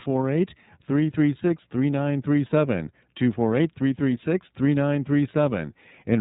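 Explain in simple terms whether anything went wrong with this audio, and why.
Throughout, the speech passes through the iLBC codec: nothing above 3.8 kHz, plus a rough, synthetic edge that a simple muffling filter wouldn't add.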